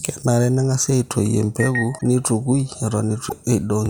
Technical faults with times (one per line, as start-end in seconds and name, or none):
1.97-2.01 broken MP3 bit reservoir
3.28-3.32 broken MP3 bit reservoir